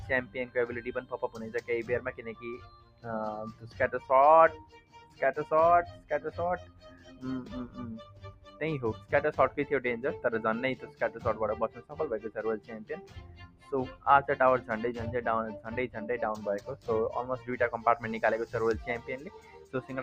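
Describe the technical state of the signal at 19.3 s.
A noise suppressor tuned for speech stays active on this audio, treating steady tones, ambience and decaying tails as noise. Throughout the clip its gain swings by roughly 15 dB, so sustained parts sink while attacks pass, giving a pumping, thinned texture.

At 19.3 s the signal falls within a stretch from 18.46 to 19.74 s where the suppressor cut this sound harder than the rest, pulling it down by up to about 11 dB for around 0.7 s in total. Held material fades and its decay is clipped short.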